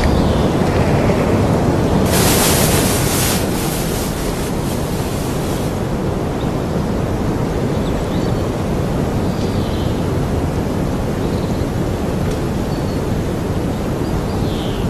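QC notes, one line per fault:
3.61–3.82 s, 7.90–8.11 s, 9.67–9.88 s, 13.02–13.23 s: frames out of order. In each spot, two adjacent 104.5 ms blocks (consistent with runs of four frames) play swapped, giving a garbled flutter. On a waveform or spectrogram, there are abrupt discontinuities where the segments meet, and no time is lost.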